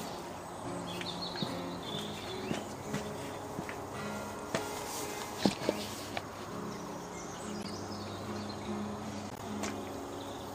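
Corrupt frames decoded at 1.46–1.59 s, 7.60–7.71 s and 9.30–9.41 s give brief chirpy noise bursts where damaged data was still played; unlike dropouts, they add sound rather than leaving gaps.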